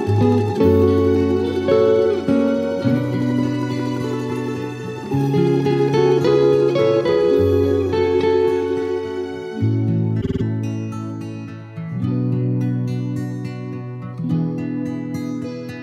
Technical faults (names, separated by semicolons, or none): repeated frames